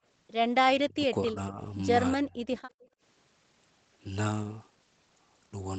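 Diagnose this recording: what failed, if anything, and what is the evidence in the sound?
The speech ducks three times: 0.7 to 1.04 s (about 30 dB at its deepest), 1.22 to 1.61 s (about 15 dB), and 2.17 to 2.5 s (about 20 dB). That's likely speech suppressed in double talk. In the call processing, the echo canceller couldn't tell the near talker from loudspeaker echo, so it pulled everything down.

Then, from 2.78 to 3.01 s, the room sound drops by about 18 dB for roughly a fifth of a second before coming back. That's background gated by the echo canceller. While the far end was playing, the canceller clamped the mic hard, then released it.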